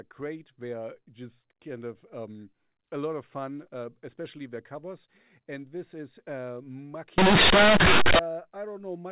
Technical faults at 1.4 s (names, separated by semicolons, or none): none